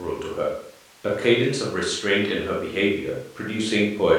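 Nothing stood out on listening to this recording of speech.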